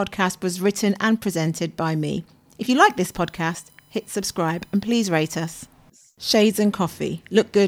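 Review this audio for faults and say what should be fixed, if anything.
A thin, steady whine sits under the speech from 2.69 to 5.67 s, pitched on a 1 kHz fundamental and strongest at its 12 kHz harmonic, faint at around 40 dB below the speech. This is USB whine: the bus's 1 ms frame activity pulls current in pulses that leak into the audio through shared power or ground. To prevent it, power the interface separately or add a USB isolator or ground-loop breaker.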